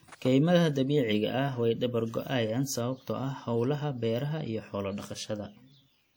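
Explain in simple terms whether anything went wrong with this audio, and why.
Yes, something went wrong: the speech carries a ringing, washy quality from start to finish, with a hiss that swells and fades along with the talking. That pattern points to WMA compression as the likely cause. The encoder squeezes the sound in fairly long chunks, so its errors smear across tens of milliseconds and quiet detail gets thrown away. Steady background noise wouldn't track the speech like this; this hiss breathes with it.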